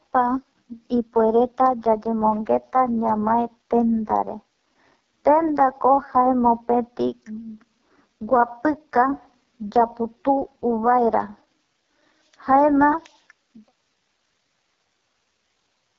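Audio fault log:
Throughout: AMR wideband (HD Voice) codec. The speech sounds rough and raspy. This heavy damage fits the lowest 6.6 kbit/s mode. The codec models the voice as pulses through a vocal tract filter. At this rate it has too few bits to place those pulses well. Nothing is heard above 7.3 kHz. The top band is only shaped noise. The fade-out near the end is complete by 13.73 s.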